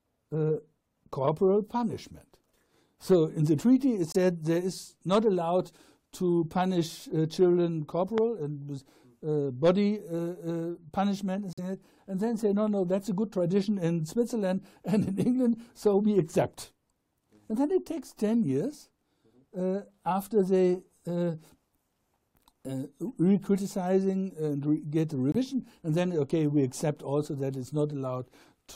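At 4.12–4.16 s, 11.53–11.59 s and 25.32–25.36 s, corrupt frame muted dropouts cut in abruptly: rejected compressed frames become silence, shown as flat waveform and blank vertical spectrogram gaps. A loud pop at 8.18–8.20 s, likely a voltage glitch, jumps about 15 dB above the sound as a lone waveform spike and full-band spectrogram line.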